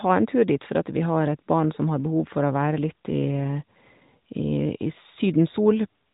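No technical faults can be heard anywhere in the speech, which carries the light coloration and 3.8 kHz ceiling of AMR narrowband mobile coding at a rate that fits its 12.2 kbps mode.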